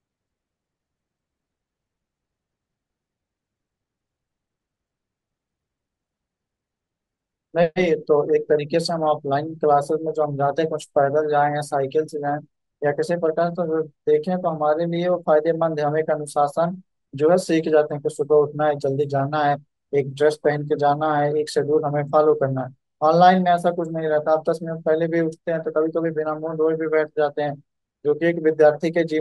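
Speech, with imaging from linear upsampling present throughout: the top of the band sounds dulled, and a faint metallic shimmer rides on sibilants. The sound fits a 24 kHz source interpolated up to 44.1 kHz, leaving a mirrored spectrum copy between 12 kHz and 24 kHz, roughly 40 dB below the signal.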